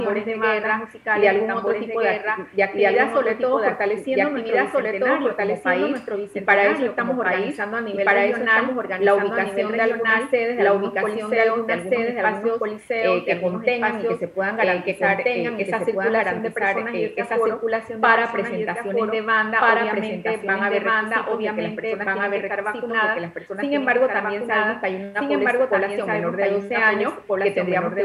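From start to end, every sound is heard twice: a full-band second copy trails the first by roughly one and a half seconds, at about the same loudness, with no decay or room colour. This doubled audio track likely comes from a second, slower capture path mixed back in.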